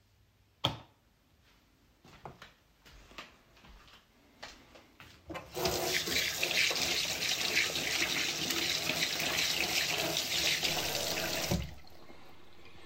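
At 10.69 s the waveform's zero line jumps by about -49 dBFS, a DC step that holds to the end, heard as a single low thump while the sound carries on unchanged.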